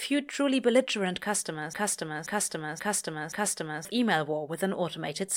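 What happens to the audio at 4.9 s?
Nothing goes wrong at 4.9 s: the speech carries on intact through that moment, with no dropout, click, distortion or other fault to be heard.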